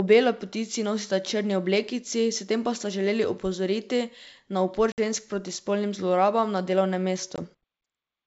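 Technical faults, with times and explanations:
4.92–4.99 s and 7.36–7.39 s, packet loss on an ADPCM call: about 60 ms is lost after "želeli opozoriti na upor", before "žensk proti spolnim", and about 20 ms after "na delovnem". Each gap is a flat-line hole in the waveform and a blank vertical stripe on the spectrogram. The sound resumes slightly distorted until the decoder's predictor and step size resynchronise.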